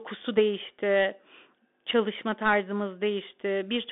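From start to finish the speech passes through a Bluetooth CVSD headset codec, limited to roughly 250 Hz to 3.6 kHz. One-bit slope tracking, which fits a 64 kbps stream, leaves a granular hiss and scratchy s sounds, which set it apart from a clean telephone band-limit.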